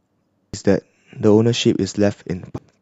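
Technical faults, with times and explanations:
0.54 s and 2.58 s, compressed frames skipped: At each point the decoder received no usable data for a run of compressed frames, either because they were missing from the stream or because it discarded them as corrupt. The sound jumps forward by roughly 0.7 s, which fits about seven frames of 92.9 ms each.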